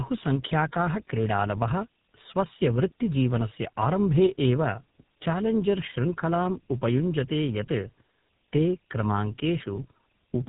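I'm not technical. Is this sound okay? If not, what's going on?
No. Throughout the whole clip, the speech shows tandem speech coding: the call passed through two different phone-network compression systems in a row, each re-squeezing the already-damaged output of the first. The result is rough, muffled, warbly speech, with nothing above about 3.8 kHz.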